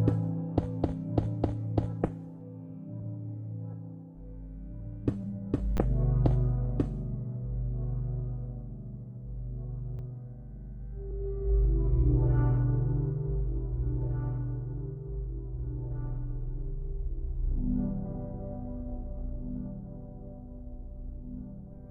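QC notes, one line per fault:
5.77–5.79 s and 9.99 s, repeated buffer: a 10 ms slice of sound plays three times, then twice, because fresh audio arrived late. The result is a brief buzzy click with no audio apparently lost. The waveform shows identical 10 ms cycles with hard joins, and the spectrogram shows thin vertical streaks.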